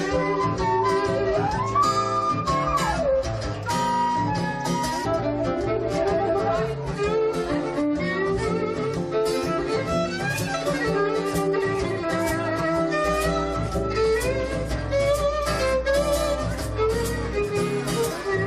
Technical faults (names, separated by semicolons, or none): mains hum